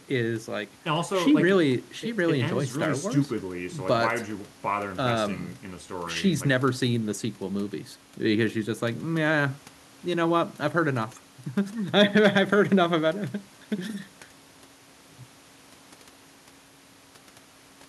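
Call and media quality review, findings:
No audible faults found in the speech; nothing to flag for the audio path.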